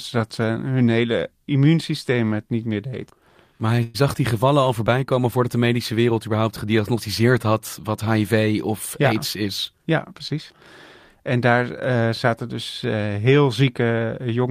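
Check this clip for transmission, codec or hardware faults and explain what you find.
Three faults are audible: two brief holds in the speech shortly before "zag die gevallen al", and a stretch later on that runs fast.

At 3.75 to 3.79 s, just ahead of "zag die gevallen al", the sound in progress hangs on for about 17 ms longer than it should, a tiny held smear rather than a break. This is a short stall from a late packet. One packet missed its slot, the jitter buffer ran dry, and the receiver extended the last audio until the packet turned up. It then resumed from the same point, so nothing was lost but 17 ms of delay was added.

From 3.83 to 3.96 s, still before "zag die gevallen al", the speech stops moving and the last sound is drawn out as a synthetic continuation for about 112 ms, with no drop to silence, before the speech picks up where it left off. This is a call audio freeze, likely caused by packets being held up in transit so that the jitter buffer emptied and the receiver had to fill the wait. 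No content is missing, but the gap adds 112 ms of delay.

Between 9.16 and 10.34 s the speech sounds hurried, running at 105% speed while the pitch stays unchanged. This is a jitter buffer speed-up. The buffer was holding more audio than its target, so the receiver trimmed out many short slices of one or a few pitch periods in quick succession, removing roughly 70 ms in total to bring the delay back down.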